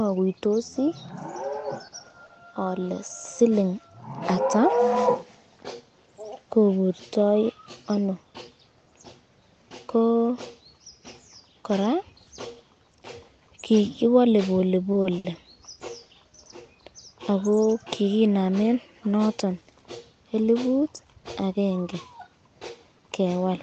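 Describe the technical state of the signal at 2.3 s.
At 2.3 s the call hits a short stall from a late packet, spanning about 2.26 to 2.31 s. A packet missed its playout time and the jitter buffer ran dry, so the receiver filled roughly 30 ms by stretching the speech it already had, then resumed exactly where it left off once the packet arrived. No speech is lost, but a sound is drawn out slightly too long with a faint buzzy or dipping texture, and everything afterwards plays about 30 ms later.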